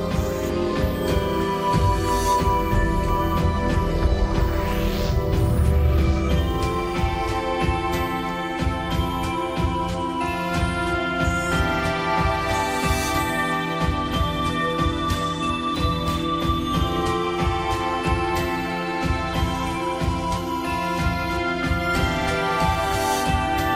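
No technical faults can be heard anywhere here.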